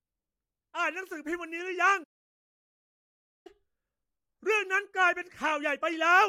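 A playback stall, likely from the player running short of buffered data or its thread being blocked, cuts output at 2.03 s. The speech stops mid-flow and leaves about 1.4 s of silence, and delivery resumes at 3.47 s.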